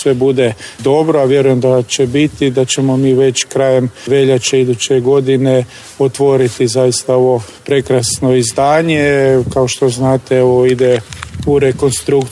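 Nothing stood out as a technical fault on listening to this audio.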